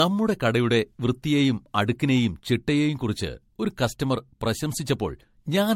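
Throughout, the speech sounds likely re-encoded as MP3 about four times at roughly 70 kbit/s. This generation loss leaves it swirly, hollow and smeared, with blurred attacks and nothing above 16.5 kHz.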